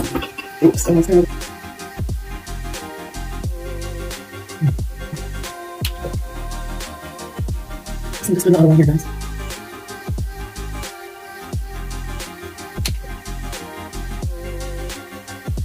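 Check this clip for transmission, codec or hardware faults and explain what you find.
One fault runs through the whole clip: low bit depth with dither. The audio carries a constant, even hiss roughly 25 dB below the signal, which fits rounding to about 8 bits with dither added first. The dither turns the rounding error into steady white noise. Undithered truncation would instead give a gritty distortion that rises and falls with the signal.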